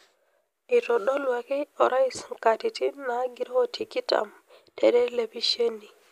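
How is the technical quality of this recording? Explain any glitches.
No technical glitches can be heard anywhere in this speech recording. There are no dropouts, clicks or other faults to explain.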